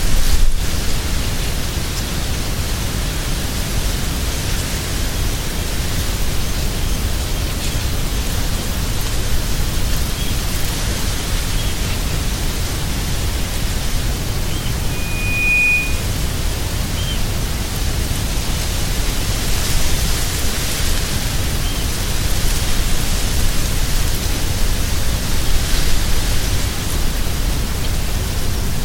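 From 14.90 to 16.17 s a 2.5 kHz tone swells over under a second into a squeal a few decibels above the sound: loudspeaker feedback squeal, the microphone re-amplifying its own loudspeaker.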